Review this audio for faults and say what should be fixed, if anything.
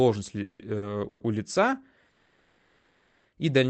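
Call audio freezes occur at 0.43 to 0.61 s, 1.08 to 1.22 s and 2.10 to 3.27 s, the last falling between "у лица" and "и дальнейшая". The last sound is carried on as a fading buzz rather than dropping to silence, most likely because packets were held up and the jitter buffer ran dry. The speech then resumes where it stopped, so nothing is lost, only delayed by about 0.16 s, 0.12 s and 1.15 s. A stall this long sets it apart from a brief late-packet stretch. Preventing it means finding and fixing the network hold-ups, and letting the jitter buffer grow adaptively when arrivals become irregular.

A short stall from a late packet appears at 0.77 to 0.84 s, still ahead of "у лица и дальнейшая". One sound is held about 50 ms too long, with a slight buzz, and then continues intact. It is too brief to fade the way a freeze does, and it adds delay without cutting any audio. A little more jitter-buffer headroom would absorb packets that arrive this late.

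The Opus call path, at 20 kbps, caps the audio bandwidth at 8 kHz.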